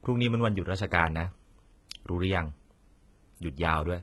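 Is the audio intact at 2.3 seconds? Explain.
No. At 2.3 seconds, as across the whole clip, the speech carries HE-AAC compression damage, and it is heavy. The likely cause is spectral band replication. Only the lower spectrum is truly coded, and the treble is rebuilt by copying lower bands upward under a coarse envelope, which fits a very low bitrate near 16 kbps. The rebuilt highs stop at about 11.8 kHz, and s sounds come out gritty, metallic or lispy.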